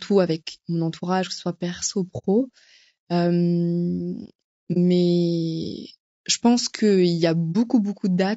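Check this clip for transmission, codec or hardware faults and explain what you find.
The speech has a rough, grainy codec character from start to end and three short muted dropouts.

Low-delay AAC compression is the likely cause of the graininess: short frames resolve pitch harmonics poorly, leaving noise between them. The sound fits AAC-ELD at about 32 kbps.

AAC frame loss with muting occurs at 2.18–2.26 s, 4.73–4.77 s and 7.52–7.56 s. The decoder zeroed the lost frames, and overlapping windows fade the sound out and back in, leaving a soft-edged hole at 2.18 s, where two frames were lost, and brief dips at the other two.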